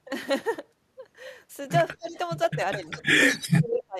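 From 1.9 to 2.16 s, and again from 2.74 s to the end of the clip, the speech is pulled down by as much as about 25 dB, dipping and breaking up in places. This is likely speech suppressed in double talk: with both sides talking, the echo canceller treated the near talker as echo and attenuated it. Within that second stretch, an echo leak appears from 3.28 to 3.46 s and from 3.74 to 3.83 s as a short, delayed copy of the speech trailing by 190 ms. The first copy sits well below the speech, and the second is nearly as loud. The likely cause is a loudspeaker-side echo canceller that failed to remove all of the pickup and sent the remainder back.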